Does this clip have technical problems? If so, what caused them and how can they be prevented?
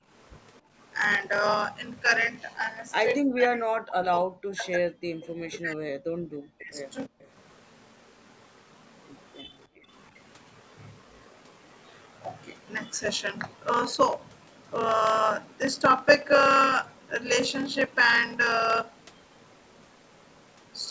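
Yes. A block size mismatch (padded) runs through the whole clip. A buzz at 38.3 Hz sits under everything, and the speech runs at 0.889 times normal speed while keeping roughly its normal pitch. Each short written block, which fits 1024 samples, is padded with silence to fill a larger read block. Matching the block sizes between the two stages prevents this.

Background gated by the echo canceller appears at 0.0 to 0.09 s, 0.61 to 0.73 s, 7.09 to 7.23 s and 9.67 to 9.88 s. The room sound dips by about 18, 23, 40 and 40 dB. The canceller clamped the microphone while the loudspeaker played. Gentler suppression or comfort noise prevents this.

Speech suppressed in double talk is heard from 3.3 to 6.03 s and from 6.58 to 6.76 s. The speech drops away deeply. Both sides talking at once likely confused the canceller, which then turned the talker down along with the echo. A canceller with better double-talk detection prevents this.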